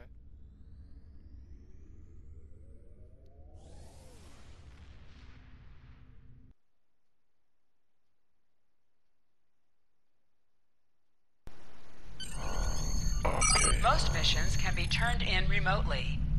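From the very start to about 11.47 s, the mono sum collapses by about 27 dB, leaving only a faint remnant. That's likely one channel inverted: one side's polarity is flipped, so everything shared between left and right cancels when they're summed.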